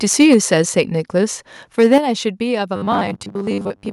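From 0.2 to 0.54 s the speech shows microphone overload. Peaks run about 3 dB past the converter's limit and get flattened, likely from input gain set too high. A small share of the audio is cut, adding a harsh crackle.

At 0.34 s the microphone volume steps down by about 3 dB. Voice and background drop together, likely the software reducing input gain.

From 1.79 to 1.98 s overload returns, about 4 dB over. A few percent of the audio is clipped. Right after, at 1.98 s, the level falls by about 7 dB.

From 2.76 s to the end comes robotic sound from repeated short buffers. A fixed 100 Hz buzz is imposed on the speech, which fits 10 ms chunks being replayed. About half the audio is repeats, likely because data arrives too late.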